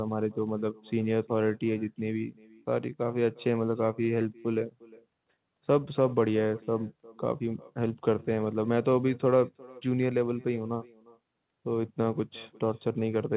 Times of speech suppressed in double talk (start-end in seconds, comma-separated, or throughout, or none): none